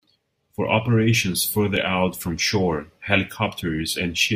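At 1.76 s, just before "out from shore", the speech drops into a 5 ms block of digital silence: samples replaced by zeros, with no fade at either edge. It sounds like a single tick. The waveform shows a flat gap, and the spectrogram a thin broadband vertical line.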